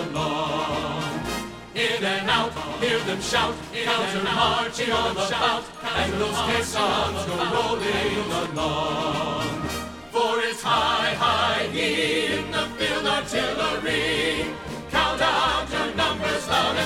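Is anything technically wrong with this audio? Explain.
Yes. From 2.56 s to 8.46 s there is a doubled audio track: a full-band copy trails about two seconds behind, roughly 5 dB quieter, likely from a second, slower capture path. It is an echo without decay or room colour, and it starts and stops abruptly. A spectrogram shows the same patterns repeated two seconds later, slightly fainter.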